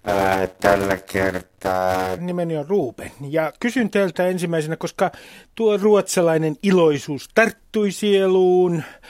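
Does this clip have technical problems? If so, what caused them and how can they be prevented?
Yes. From 0 to 2.18 s, a block size mismatch (padded) zero-fills each short block. This gives a 91.9 Hz buzz and 0.533x speed, but timbre stays normal, unlike a sample-rate slowdown. Prevent it by matching the block sizes of adjacent processing stages.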